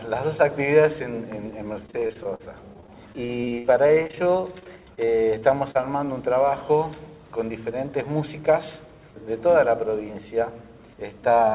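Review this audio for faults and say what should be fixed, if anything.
From 1.74 to 5.84 s, packets were repeatedly lost or arrived late, and the receiver patched each hole by extending the last stretch of sound. This is repeated packet loss, heard as a robotic, choppy passage. About thirty short gaps crowd this span, the longest 57 ms, and roughly a sixth of the span is concealment rather than real signal. The result is a stuttering texture with pieces missing. The narrowband G.711 call path underneath it explains the absence of anything above 4 kHz. To prevent this, stabilise the network path or enlarge the jitter buffer and add forward error correction.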